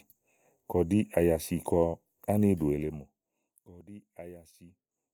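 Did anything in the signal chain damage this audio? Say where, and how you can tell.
Yes. Zipper noise damages the speech from 2.69 to 3.6 s, as the level drops by roughly 20 dB. The gain moves in discrete jumps, around 50 per second. That points to a gain stage at the driver or buffer level that updates once per block of about 20 ms, with no ramp. Each jump clicks, so a fine ticking rides on the fade. A waveform shows a staircase envelope, and a spectrogram shows evenly spaced faint vertical lines.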